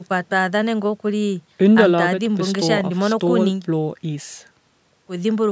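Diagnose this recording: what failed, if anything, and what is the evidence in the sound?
Nothing failed here: the speech has simply passed through a call's microphone processing, which leaves no content above 8 kHz and trims the lowest bass with its high-pass filter, and that is normal behaviour for that stage.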